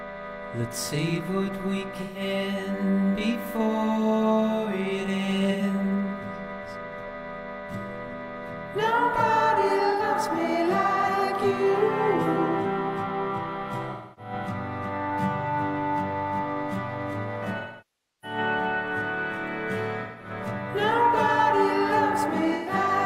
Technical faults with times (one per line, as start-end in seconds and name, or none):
2.01-2.21 AAC frame loss with concealment
5.51-5.62 AAC frame loss with concealment
9.91-10.02 AAC frame loss with concealment
13.92-14.32 AAC frame loss with concealment
17.59-18.38 AAC frame loss with concealment
20.02-20.30 AAC frame loss with concealment
22.54-22.73 AAC frame loss with concealment